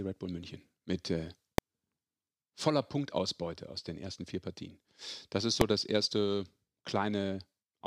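At 1.58 s, just after "mit äh", the speech is hit by a single sharp bang, and at 5.61 s a second bang lands just before "das erste". Both are invalid numbers at full scale. A calculation produced infinite or invalid values, which became the largest positive or negative value, pinning the output at one extreme value far beyond the speech peaks for under a millisecond, which fits a 32-sample block. The waveform shows a flat rectangular spike, and the spectrogram shows a thin vertical line across all frequencies.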